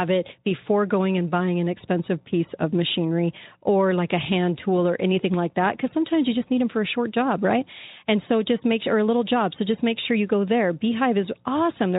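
There are no technical faults to describe anywhere in this speech clip.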